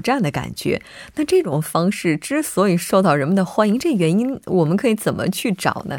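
From 1.44 to 1.52 s the speech abruptly falls about 6 dB, then returns. The likely cause is that one channel drops out before the mono sum.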